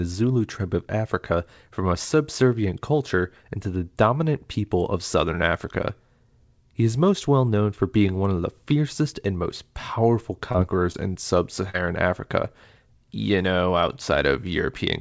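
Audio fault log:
10.52–10.56 s, 10.92–10.96 s and 11.70–11.76 s: short concealed packet loss. Between "fiercest and most powerful" and "in sub", two gaps of about 20 ms were patched. A 40 ms gap just after "in sub" was patched too. Each time, the receiver extended the preceding sound and faded back in. This leaves a brief smear or wobble, set against the call path's G.722 band limit at 8 kHz.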